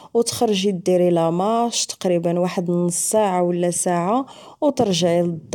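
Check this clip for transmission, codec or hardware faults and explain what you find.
Listening through the whole recording, I can't pick out anything that's gone wrong with how this speech was carried or captured.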